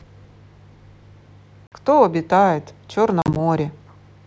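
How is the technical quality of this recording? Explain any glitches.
Two dropouts caused by packet loss on an ADPCM call disrupt the recording. The G.722 wideband coding shows little or no damage of its own.

At 1.67 s, about 50 ms, a handful of packets, drops out into hard-edged silence. From 3.22 to 3.37 s, about 70 ms is lost in scattered gaps over 140 ms, the longest 40 ms. Each gap leaves the decoder's adaptive predictor and step size out of step with the sender's. The sound then resumes slightly distorted before settling.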